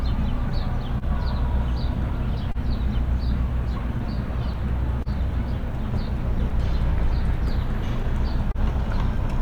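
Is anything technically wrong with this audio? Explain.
Yes, there are three kinds of fault in this recording of everyday sounds.

Clock drift between sender and receiver runs throughout. The sender's clock is roughly 2 percent slow, so the jitter buffer keeps draining and the receiver repeatedly stretches or repeats short pieces. The result is small timing hiccups at uneven intervals across the whole clip.

A short stall from a late packet occurs at 0.98 s, 2.51 s and 5.02 s, each lasting about 60 ms. Each time, a packet arrived 30 ms late and the buffer ran empty. The receiver held the last sound for 30 ms and then resumed without losing anything. Each stall is heard as a briefly prolonged sound with a slight buzz or dip.

Scattered short gaps appear between 6.50 s and 8.57 s. About five packets were lost or late, the longest gap being around 30 ms, and together they cover only a small share of that stretch. 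Each hole was patched by continuing the preceding sound, which leaves brief ticks and smears.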